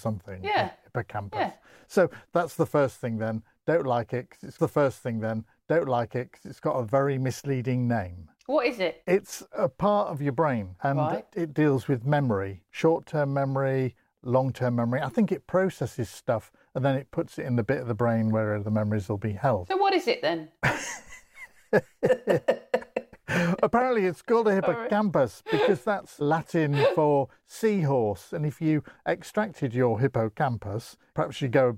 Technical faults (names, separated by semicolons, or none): stream segment repeated